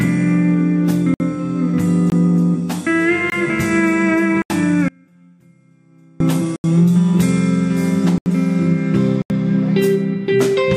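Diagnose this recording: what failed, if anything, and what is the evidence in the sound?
The driver or buffer stage failed to deliver samples in time, leaving blocks of digital silence at 1.14 s (60 ms), 2.10 s and 3.30 s (20 ms each), and 4.42, 6.56, 8.18 and 9.22 s (80 ms each). Each hole is silent, with no hiss inside, which marks these as underruns rather than signal loss.

From 4.88 to 6.20 s, about 1.3 s, there is an audio dropout to a faint residue: the sound cuts abruptly to a trace about 35 dB down, then returns. Unlike the silent blocks, the gap still holds sound, so the path after the break stayed live, the wanted signal likely lost somewhere upstream.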